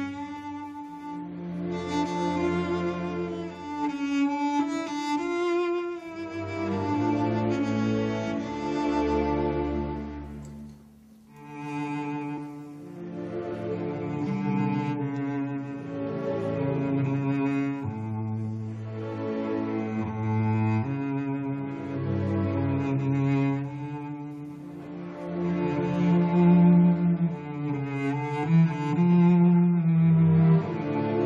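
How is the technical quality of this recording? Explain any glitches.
There is one glitch, at 12.37 s, where compressed frames are skipped. Roughly three consecutive frames of the encoded stream were never decoded, either missing from the file or rejected by the decoder as corrupt, so playback jumps forward by about 70 ms. The 23.2 ms frame spacing fits a 1024-sample frame at 44.1 kHz. Because adjacent frames overlap, the seam comes out as a short smeared blip, not a sharp click, with a small chunk of the sound abruptly missing.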